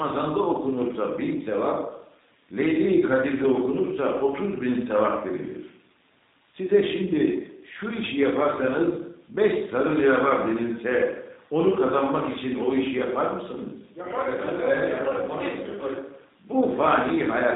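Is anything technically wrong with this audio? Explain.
Yes. Throughout the clip the speech has passed through a G.729 codec, with the audible character of the 8 kbit/s G.729A variant. The codec models each frame as a vocal tract filter, pitch predictor and sparse pulses, discarding everything above 3.8 kHz, so voices sound muffled, slightly rough and synthetic.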